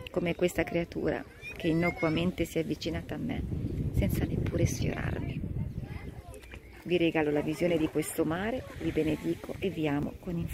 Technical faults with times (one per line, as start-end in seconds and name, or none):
0.51 dropped buffer (overrun)
10.03 dropped buffer (overrun)